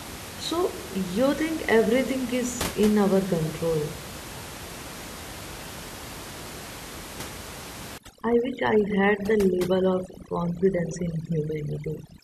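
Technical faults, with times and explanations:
7.98–12.23 s, overdone noise removal: heavy noise reduction mutes frequency bands near its noise estimate, so the room noise drops and breaks up into twinkling specks. A spectrogram shows a blank background with scattered bright dots and ragged harmonics.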